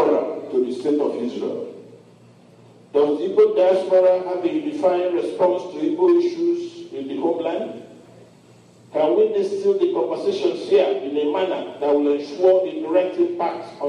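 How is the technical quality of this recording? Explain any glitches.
Nothing in the recording stood out as a technical problem on listening.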